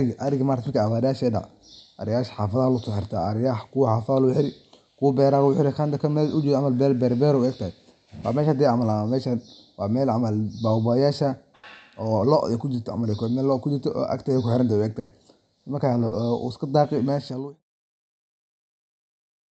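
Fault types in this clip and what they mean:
burst of packet loss: at 11.55 s and 14.99 s, lost packets are bridged by the previous sound fading away, skipping 80 ms and 120 ms of speech.
short concealed packet loss: at 16.07 s, 40 ms never arrived; the decoder extended the preceding sound and blended back, leaving a brief smear.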